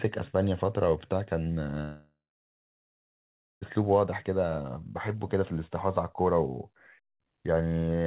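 At 1.82 s the speech breaks off until 3.63 s. The last sound is drawn out into a fading buzz. About 1.4 s of near silence follows. This is likely a long network dropout. Speech returns with about 1.8 s lost, still capped at 4 kHz.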